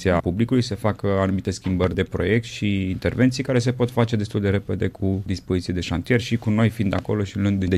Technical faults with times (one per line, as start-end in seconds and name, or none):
1.84-1.86 loud pop
6.99-7.01 loud pop